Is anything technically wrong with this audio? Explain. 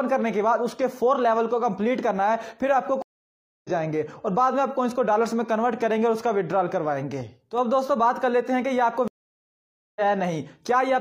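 Yes. There are two stream reconnects. The first runs from 3.02 to 3.70 s, with about 0.62 s of silence. The second runs from 9.08 to 10.01 s, with about 0.88 s of silence. Each time, the connection dropped, the player fell silent, then reconnected and began decoding afresh partway through the stream. What sets this apart from a plain dropout or buffer underrun is where the sound comes back. It doesn't pick up where it stopped but jumps ahead, by roughly half a second the first time and roughly 0.7 s the second.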